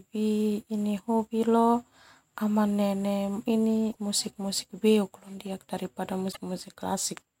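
Damaged data in a compressed stream appears at 3.88 to 3.96 s and again at 6.28 to 6.37 s, just after "beuk daripada". Each time, a stretch of the encoded speech stream is corrupt, so the decoder misreads those frames, loses sync and hunts for the next valid frame header. What comes out is a brief, roughly 80 ms chirp, squawk, click or short hole that breaks into the speech before normal decoding resumes.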